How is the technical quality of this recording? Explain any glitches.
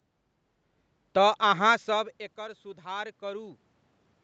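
There's one glitch worth flagging, an automatic gain rise. From 1.87 to 3.65 s the voice and room noise swell together by about 4 dB. After the level dropped about 19 dB, likely from the talker moving back around 1.5 s, the gain control slowly pushed its gain up to compensate.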